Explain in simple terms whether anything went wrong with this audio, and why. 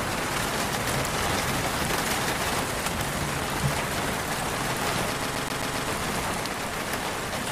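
At 5.22 s the audio gets stuck: the same 0.13 s snippet plays five times in a row, with a tiny gap at each jump, until 5.88 s. This is a CD stuck on one turn, where a scratch keeps knocking the laser back to the same spot.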